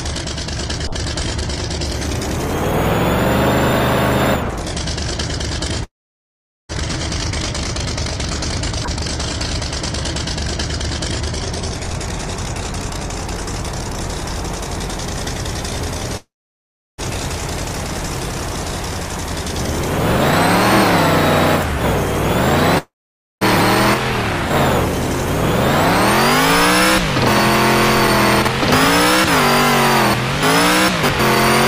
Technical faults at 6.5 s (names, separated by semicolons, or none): long network dropout